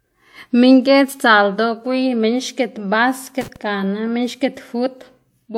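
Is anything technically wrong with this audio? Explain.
Yes. From 3.41 s to 3.56 s the speech is hit by loose connector crackle. Somewhere in the signal path a worn or dirty contact is shifting, so the connection makes and breaks in rapid succession. Each break chops the signal, and any DC sitting on the line turns those interruptions into pops. Over those 0.15 s the result is an irregular burst of crackle and scratching laid across the speech.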